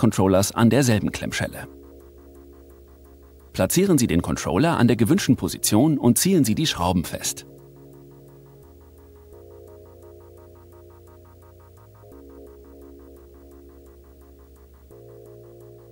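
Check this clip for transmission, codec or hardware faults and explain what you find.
There's one fault, video or display buzz, running through the whole clip. A screen or video cable is leaking into the audio path, giving a 59.94 Hz buzz at the field rate with hash above it, plus a whine at 15.7 kHz from the line scan. It sits well down, roughly 35 dB under the main sound.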